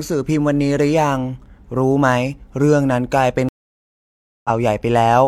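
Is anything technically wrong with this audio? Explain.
Yes. At 3.49 s the speech drops to silence for just under a second, returning at 4.50 s slightly further on, with roughly 150 ms skipped. This is a stream reconnect: the connection broke, and the player reconnected and restarted its decoder mid-stream.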